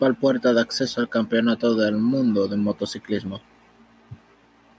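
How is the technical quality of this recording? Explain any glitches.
One glitch stands out, heard through the band-limited sound of call microphone processing, which carries nothing above 8 kHz. Automatic gain rising runs from 0.2 to 2.84 s: the gain control judged the input too quiet and lifted its gain gradually, by about 5 dB, so the speech and the background noise swell together over those 2.6 seconds.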